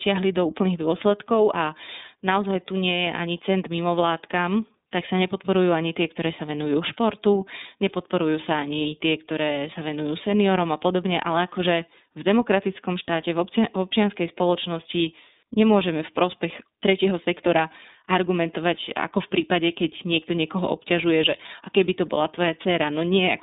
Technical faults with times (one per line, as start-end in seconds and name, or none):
0.00-23.42 iLBC codec